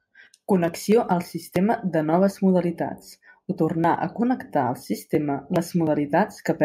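At 2.13 s, just after "al sistema de", the microphone volume steps up by about 4 dB. Software raised the input gain at once, so voice and background jump louder together.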